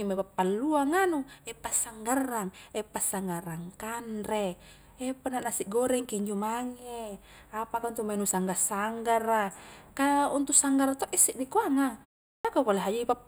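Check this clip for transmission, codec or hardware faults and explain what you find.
Two faults are audible: a steady comb filter across the whole clip and one clipped word onset near the end.

Channel delay (comb filtering) runs throughout. One channel lags the other by only a few samples, a small fraction of a millisecond, so when they sum to mono, shared content cancels at evenly spaced frequencies starting around 7 kHz. The speech sounds dull and slightly phasey at the top end.

Clipped start after a pause occurs at 12.38 to 12.45 s. After a silence of about 0.41 s, the output device had dropped into an idle state and needed time to resume, so the first 66 ms of the next word never reaches the output. The word starts abruptly out of silence without its opening sound.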